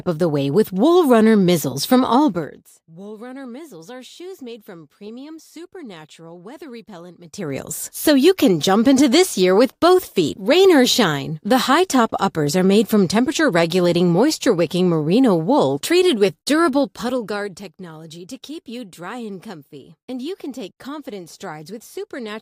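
From 2.28 to 2.72 s, and again from 16.64 to 17.64 s, the level drops in unsmoothed 2 dB steps, about 20 dB then about 15 dB. That is zipper noise: a fast buzz, then slower audible ticks.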